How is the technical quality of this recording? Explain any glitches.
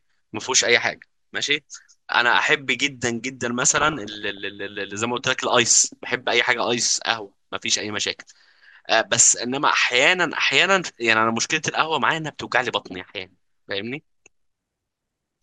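The speech is marred twice by DAB burbling: a short burst from 0.82 to 1.02 s and a longer one from 3.62 to 4.45 s. The first corrupts 15 frames and the second 35. This happens when weak reception leaves a small fraction of bits, around 0.4 to 0.5 percent, corrupted past the error correction. Bad samples then put short blips of noise into single sub-bands, and bad scale factors make individual sub-bands jump in level for up to a frame.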